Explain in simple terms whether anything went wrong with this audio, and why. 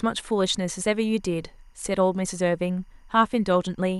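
Timecode bleed runs through the whole clip, from start to end. A timing signal from a nearby cable or track leaked into the recording. It flips between tones around 1 and 2 kHz at 24 frames per second, leaving a faint, steady chirping warble behind the speech.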